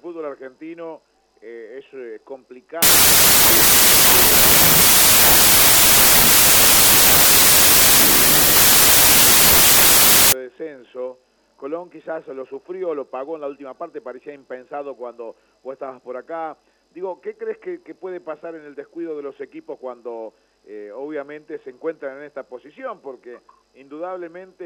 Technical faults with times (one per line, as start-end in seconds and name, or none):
2.82-10.32 wrong sample width